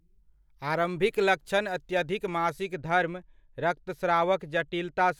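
From 2.74 s to the end of the speech, de-emphasis has been applied wrongly. A treble-cutting curve meant to reverse pre-emphasis was applied either where none was present or a second time, rolling off the highs smoothly to about 8 dB down at 10 kHz relative to 1 kHz. The voice turns dull and muffled.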